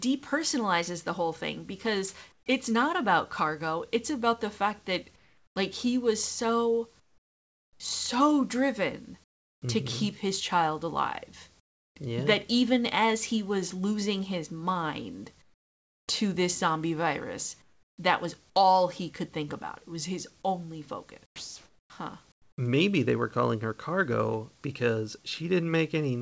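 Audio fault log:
2.32–2.46, 5.16–5.56, 7.00–7.80, 9.24–9.62, 11.60–11.96, 15.42–16.08, 17.62–17.98 and 21.26–22.58 s: comfort noise in place of the background. The pauses become a smooth, featureless hiss, about 7 to 25 dB quieter than the real room noise, not silence as in a dropout. This is likely discontinuous transmission.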